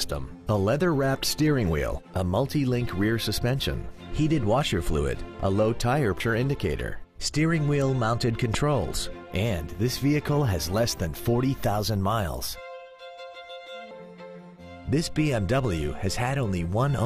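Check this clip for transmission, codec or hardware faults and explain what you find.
There are three faults: two spots where compressed frames were skipped and one loud pop.

At 6.20 s and again at 13.91 s the audio jumps ahead. Compressed frames were skipped: chunks of the encoded stream were missing or thrown out by the decoder as damaged, so playback leaps forward. The first jump loses around a fifth of a second and the second nearer a third, which fits losing two and then three frames of about 93 ms each.

From 8.54 to 8.56 s there's a loud pop, a single sharp hit that peaks roughly 15 dB above the surrounding audio while the sound keeps going underneath. It's likely an electrical transient, a sudden voltage step from a plug, switch, static discharge or driver glitch, added to the signal and shaped by the circuitry after it into a brief thump.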